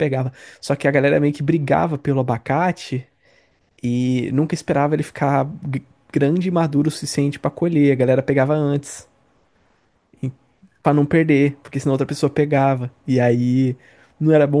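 Nothing stood out as a technical problem on listening to this speech recording.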